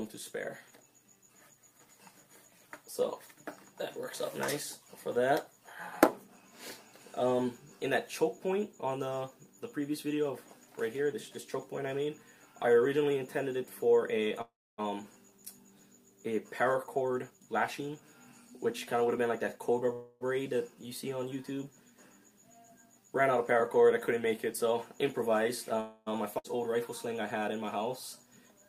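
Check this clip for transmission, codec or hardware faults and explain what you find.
Three kinds of transmission fault can be heard, all typical of packet delivery over a network call.

Call audio freeze at 14.41 to 14.80 s, 19.93 to 20.23 s and 25.80 to 26.08 s: packets were likely delayed until the jitter buffer emptied, so the receiver extended the last sound. In the first, this buzz dies away into about 0.27 s of silence. The second sustains it throughout, and the third fades only at the very end. Each inserts a pause of 0.26 to 0.37 s, with nothing lost.

Jitter buffer speed-up from 16.51 to 19.89 s: the buffer had built up excess audio, so the receiver repeatedly trimmed tiny pitch-period slices, roughly 0.4 s in total. Playback runs at 110% speed without any pitch change, and the sound comes across as rushed.

Skip ahead at 26.38 to 26.58 s: an overfull buffer or lost packets dropped roughly 0.3 s of audio while later material was queued. 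Playback leaps forward, and the two sides are stitched together with almost no gap.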